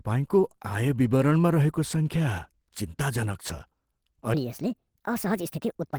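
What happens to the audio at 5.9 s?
A section at the wrong speed runs from 4.34 s to the end of the clip, covering 5.9 s. The speech there plays about 1.45 times too fast, most likely from being fitted to the wrong clock, so it sounds hurried and roughly seven semitones higher.

Opus compression is also present at that moment, as throughout. At about 16 kbps in hybrid mode, the encoder likely fills starved bands with folded or noise content, leaving the speech plainly grainy and hoarse even though the bandwidth extends to about 20 kHz.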